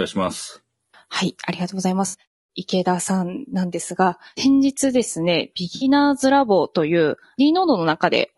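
A low-bitrate, low-delay codec runs through the whole clip, most likely AAC-ELD, the low-delay AAC used for video calls, at a rate around 32 kbps. Its short frames resolve the harmonics of the speech poorly and leave few bits to spend, so the damage is plain throughout. The voice sounds rough and grainy, with noise filling the gaps between harmonics and a dulled, somewhat synthetic top band.

There is AAC frame loss with concealment at 2.07 to 2.15 s and again at 5.75 to 5.85 s. Each time about 60 ms of audio goes missing, which fits a run of three frames. The decoder patches the gap by rebuilding sound from the last good spectrum. Both spots come out as a brief smeared, noisy or phasey patch in the speech rather than a dropout to silence.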